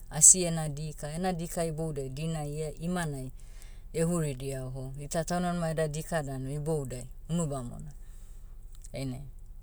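No technical faults are audible.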